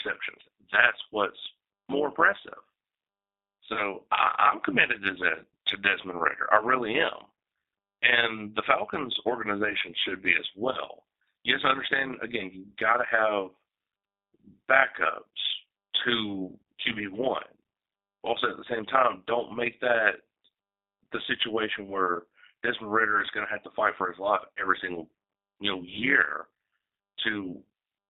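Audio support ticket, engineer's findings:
G.729 codec, entire clip. Speech band-limited to 250 Hz to 3.7 kHz. Rough, synthetic texture from 8 kbit/s CELP rebuilding of pitch, filter and pulses.

Overlap-add ripple, entire clip. Metallic buzz near 100 Hz, about 11 dB deep. Frame reassembly overlap not summing to constant gain.

VoIP packet loss concealed by the speech codec, 3.73 to 3.81 s, before "I am committed to", and 10.71 to 10.80 s, after "organization should be as". Fading extrapolated tone or noise, consistent with one lost packet each. 30 ms missing. Decoder carries weakened state past the gap.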